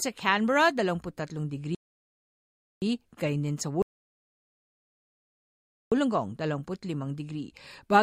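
At 1.75 s the speech halts in a rebuffering stall, silent until 2.82 s (about 1.07 s added), and again from 3.82 to 5.92 s (about 2.10 s). The player exhausted its downloaded audio; playback resumes exactly where it stopped, losing nothing.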